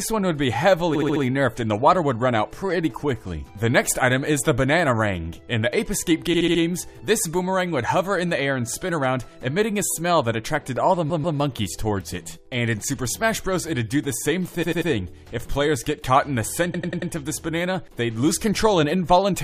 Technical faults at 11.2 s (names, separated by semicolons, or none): repeated frames